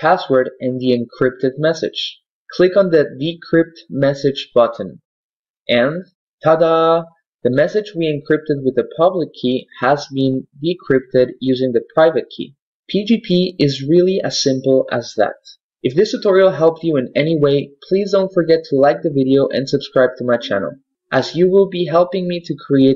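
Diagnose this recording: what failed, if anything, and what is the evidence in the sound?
Nothing in the signal chain points to a failure at any stage, with no audible break, distortion, dropout or timing disturbance anywhere in the recording.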